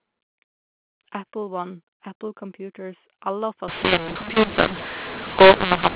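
From 3.68 s to the end, a mu-law and A-law mix-up: the mu-law audio is decoded as A-law, scrambling levels. Speech turns harsh and distorted, pauses fill with hiss, the waveform's gaps lift off zero, and the spectrogram fills with broadband noise below 4 kHz.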